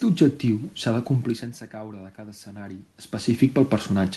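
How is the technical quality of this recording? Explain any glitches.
One glitch stands out: automatic gain rising from 0.54 to 2.93 s. When the input level fell by about 15 dB, the gain control slowly added about 4 dB, so the room noise swells along with the voice. That shared swell is what separates it from the talker simply moving, as happens near 1.0 and 3.0 s, where only the voice changes. The call path's Opus coding is audible as a top end that stops around 12 kHz.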